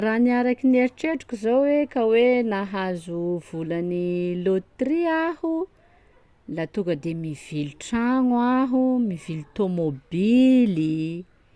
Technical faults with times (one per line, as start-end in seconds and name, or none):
none